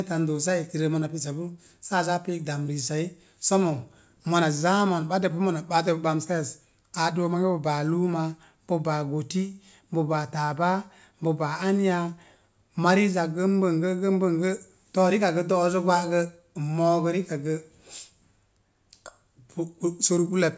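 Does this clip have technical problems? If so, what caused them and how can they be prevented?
No technical problems detected.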